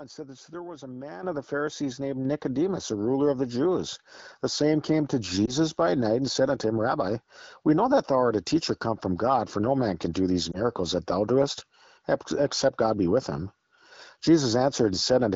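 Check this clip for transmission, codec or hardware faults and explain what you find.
Two kinds of fault are audible: a single upward step in microphone level near the start, and two brief lost AMR speech frames later on. The AMR wideband (HD Voice) coding itself sounds clean, with only light coding texture consistent with a rate around 12.65 kbit/s.

Microphone volume stepped up, at 1.23 s, between "there was a man" and "of the". The call software judged the input too quiet and raised the device's input volume in one move, by about 9 dB. The voice and the background noise floor jump together and stay at the new level. That shared, permanent jump separates it from automatic gain control pumping, which rises and falls gradually, and from a talker simply speaking louder, which would leave the background unchanged.

Lost AMR speech frames, from 5.45 to 5.54 s (after "same came to", before "by night and said") and from 10.51 to 10.60 s (after "man can do these", before "that thou doest except"). 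In each case the sound points to a single missing 20 ms frame. With no valid data, the decoder re-used its last pitch and vocal tract settings at lowered gain, giving a short dip or warble before the voice recovers, briefly thin. A dropout or gap would leave silence or a click instead of this synthetic held-over tone.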